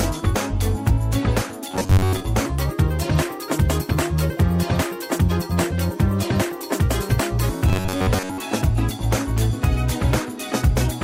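From 1.71 to 2.23 s, new audio likely arrived too seldom, so the player filled the gaps by looping a buffer of roughly 10.7 ms in place of most of the real signal. This robotic sound from repeated short buffers imposes a rigid, metallic buzz at 93.8 Hz that only loosely tracks the underlying sound.

From 2.46 to 7.49 s comes a section at the wrong speed, likely from playback against the wrong clock. It runs 1.25 times too fast, so the sound turns hurried and is raised about four semitones in pitch.

From 7.69 to 8.40 s, the buffer starvation likely returns, and the same 93.8 Hz robotic buzz replaces most of the audio again.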